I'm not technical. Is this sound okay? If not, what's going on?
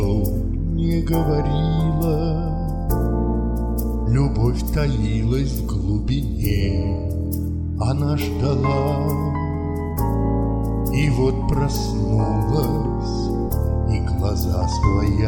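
Yes, nothing in the recording points to a technical problem.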